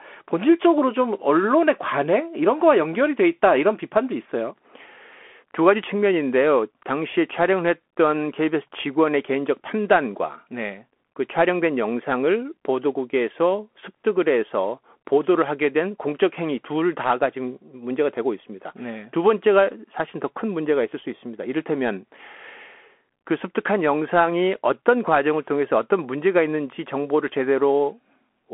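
The whole clip runs through a Bluetooth CVSD headset codec. The speech is squeezed to about 250 Hz to 3.4 kHz with nothing above 3.8 kHz, and the one-bit coding leaves scratchy s sounds and grainy hiss.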